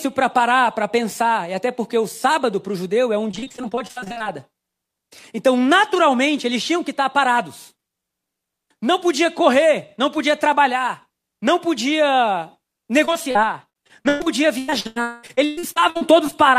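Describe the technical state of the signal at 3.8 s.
At 3.8 s the speech falls inside a stretch of repeated packet loss from 3.31 to 4.27 s. Around twenty brief dropouts, none longer than 47 ms, are patched by extending the preceding sound. Roughly 43% of the span is filler, producing choppy, robotic speech.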